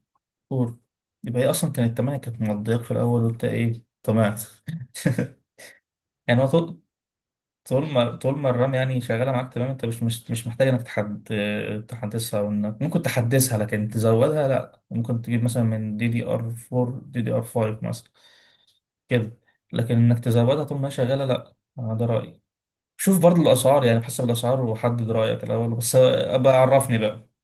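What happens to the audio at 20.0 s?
At 20.0 s the speech is intact and shows only the light, steady colouring of its Opus voice compression.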